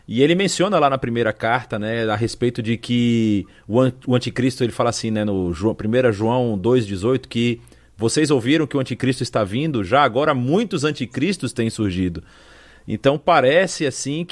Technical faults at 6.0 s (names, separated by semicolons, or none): none